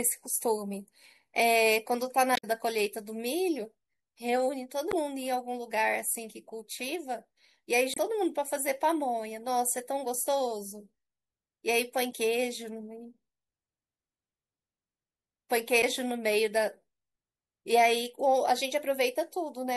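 Throughout the speech there is a watery, swirling quality, with a dull top end and metallic chirping on s sounds. This is likely MP3 compression, at a rate that fits roughly 64 kbps. At that rate the encoder runs short of bits, cuts the treble at a fixed frequency, and drops weaker frequency components that flicker in and out between frames. That flicker is what gives the sound its unsettled, underwater texture.

At 2.34 to 2.44 s, 4.88 to 4.94 s, 7.93 to 7.98 s, 12.09 to 12.13 s and 15.80 to 15.84 s, brief squawks or blips break through, each lasting between about 40 and 100 ms. These are damaged data in a compressed stream. Bytes in the encoded file were lost or corrupted at those points, so the decoder misreads the affected frames, loses sync and has to search for the next valid frame header before playback settles again.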